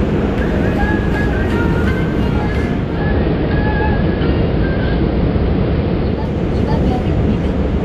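At 2.68 s this everyday-sound recording shows digital radio blending to analogue. Over a cross-fade of about 0.42 s the receiver loses its digital stream and falls back to the AM broadcast of the same station. It returns to digital at 6.44 s. During that stretch the top end is cut off, and steady hiss sits roughly 30 dB below the signal while the level holds. On a spectrogram the upper band empties over the cross-fade and a faint noise floor fills the gaps.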